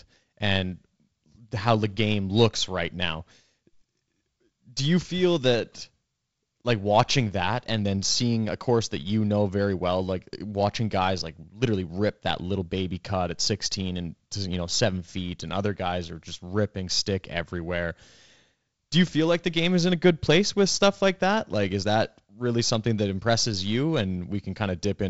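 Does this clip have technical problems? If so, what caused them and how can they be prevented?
No, there are no technical problems here; the speech carries the expected G.722 wideband telephone coding, with the band ending near 7.7 kHz and only a light coding hiss, so there is nothing to prevent.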